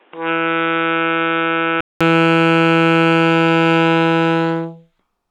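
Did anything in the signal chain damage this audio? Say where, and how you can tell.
Yes. From 0.0 to 2.01 s the sound is band-limited, with nothing above 3.8 kHz, and it sits somewhat quieter, by roughly 5 dB, over its own noise floor about 35 dB down. A 200 ms silence marks the change before full bandwidth returns. This is likely an input switched to a poorer device at the driver stage. On a spectrogram the opening shows a hard ceiling near 3.8 kHz, then a gap, then energy reaching high again. The waveform steps up in level after the gap.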